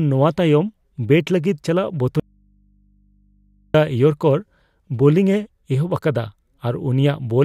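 At 2.20 s the speech cuts off abruptly and, for about 1.5 s until 3.74 s, only a low mains hum remains, roughly 40 dB below the speech level. This audio dropout to a faint residue likely comes from the signal being lost while the input stayed live.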